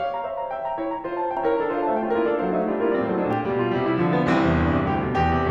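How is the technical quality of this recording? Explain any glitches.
The recording has one clear fault, a doubled audio track, from 1.37 s to 3.33 s. A second full-band copy of the music plays roughly 0.7 s behind, at about the same level. It is likely a slower capture path or misaligned edit. The copy has no decay or room colouring and starts and stops abruptly.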